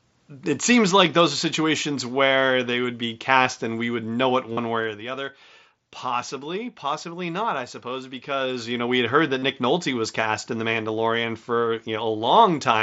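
Right after "we would know it", from 4.53 to 4.57 s, there's concealed Bluetooth headset packet loss. About 45 ms of audio went missing between headset and phone, and the receiver patched it by repeating recent waveform, giving a short buzzy hold. Then from 4.74 to 5.14 s the level drops by roughly 10 dB in 1 dB steps, about thirty a second with no smoothing, so you hear zipper noise, a fine ticking over the fade. After "had heard", from 9.39 to 9.43 s, the same packet loss concealment hits again, this time about 37.5 ms, with that brief buzzy fill and a slight warble as real audio resumes.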